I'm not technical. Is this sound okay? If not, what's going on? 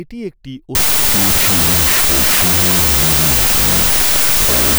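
No. From about 0.75 s to the end there's a wrong sample width fault: the speech is buried in loud harsh noise and plays slow and low, at half speed.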